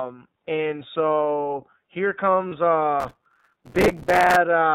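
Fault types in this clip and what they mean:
iLBC codec: A band-limited, slightly rough and synthetic quality throughout, cut off above 4 kHz, which fits 30 ms iLBC frames at 13.33 kbps.
Lost iLBC frames: A brief held, buzzy vowel-like sound at about 2.49 s, where one 30 ms frame was lost and filled by repeating the last pitch cycle.
Processor overload crackle: Gritty tearing crackle from 3.00 to 4.36 s, as very short buffers, around 3 ms each, repeatedly missed deadlines and replayed old audio with hard edges.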